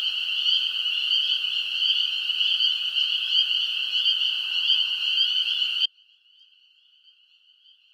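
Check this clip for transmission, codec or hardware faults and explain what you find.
One fault appears: an audio dropout to a faint residue starting at 5.86 s and lasting to the end. The sound cuts out abruptly, leaving only a faint trace of the signal, roughly 35 dB below its normal level. The likely cause is a break in the wanted signal while the path after it stayed live. Unlike a natural pause or fade, the level collapses instantly, and the residue shows the path never went fully silent.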